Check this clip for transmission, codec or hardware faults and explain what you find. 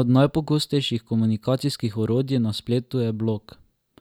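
Nothing to report: no transmission, codec or hardware problem is audible anywhere in this speech.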